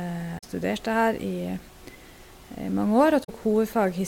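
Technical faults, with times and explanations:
0.35–0.44 s and 3.21–3.29 s, damaged data in a compressed stream: each event is a short burst of about 90 ms where the speech gives way to a chirp, squawk, click or short hole. Corrupted bytes in the compressed stream make the decoder misread those frames and lose sync. The garbled output is what it produced while searching for the next valid frame header.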